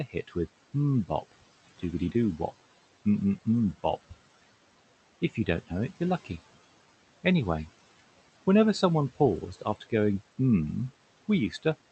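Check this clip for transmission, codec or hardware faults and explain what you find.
Noise suppressor artifacts run through the whole speech clip, and the same processing cuts speech at two moments.

Noise suppressor artifacts: the room noise, about 19 dB below the speech, is pulled down by about 16 dB in the gaps and comes back under each phrase. The suppressor decides band by band and frame by frame which energy is noise.

Speech cut by the noise suppressor: from 0.10 to 0.36 s and again from 9.53 to 9.92 s, low-level parts of the speech are taken for noise and attenuated, by up to about 12 dB and about 15 dB respectively. A short stretch of each, about a tenth of a second and a bit more, sounds swallowed or faint. The audio reaches the listener through an Opus call path, with the band limit that suggests.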